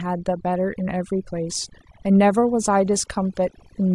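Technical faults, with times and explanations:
Throughout: overdone noise removal. The noise reduction was set too aggressively, so frequency bands near its noise estimate are pulled far down or cut entirely, taking quiet parts of the speech with them. The background drops and breaks up into twinkling specks.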